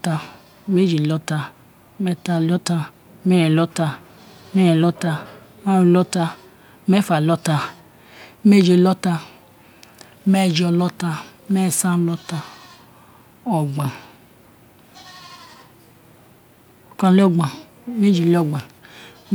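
Nothing goes wrong in this speech recording; there's no technical fault anywhere in it to point out.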